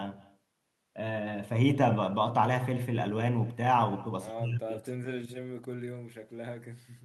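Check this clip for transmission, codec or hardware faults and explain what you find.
One transmission fault runs through the whole speech clip: echo with no canceller. It is present from start to finish. Each phrase returns about a fifth of a second later, at about 23 dB below the direct speech. The far end is playing the call through a loudspeaker. Its microphone picks that playback up and sends it back, and nothing cancels it. The result is a faint, thin shadow trailing every phrase.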